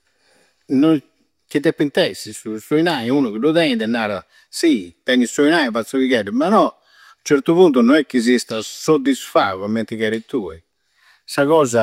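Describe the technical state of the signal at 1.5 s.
At 1.5 s you're hearing sample clock jitter, and it's not local to that moment. It runs through the whole speech clip. The converter's clock is wobbling by something on the order of a microsecond, so each sample lands a touch early or late. Steep, fast-moving parts of the waveform pick up the biggest errors. The result is a faint hiss or grit, roughly 45 dB under the signal, that swells on loud or bright speech and drops away in the pauses.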